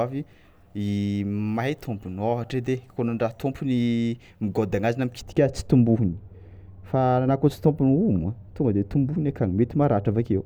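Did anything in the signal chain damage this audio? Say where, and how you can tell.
Yes. From 5.21 s, just after "anazy na", to the end, a processing stage applied de-emphasis wrongly, cutting treble from a signal that had no matching pre-emphasis. The response slopes smoothly downward, about 11 dB lower at 10 kHz than at 1 kHz, so the speech turns dull and muffled.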